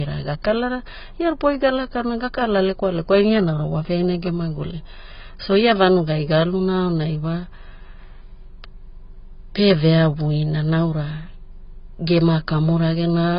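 From start to finish the speech carries heavy AAC compression damage. Nothing is heard above about 5.1 kHz, so the top of the spectrum is simply gone and the sound is dull. Sibilants lose their edge and turn fizzy. Sustained sounds warble as the coder's coarse quantisation shifts from frame to frame. The cause is likely AAC-LC at a very low bitrate, around 16 kbps, which strips and starves the upper bands.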